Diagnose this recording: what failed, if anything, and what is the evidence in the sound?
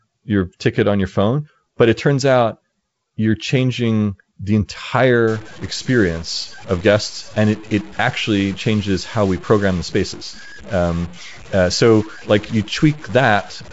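From 5.28 s to the end, distortion and noisy pauses point to a stuck bit, likely at the converter. The waveform shows offset jumps and the spectrogram shows broadband hash.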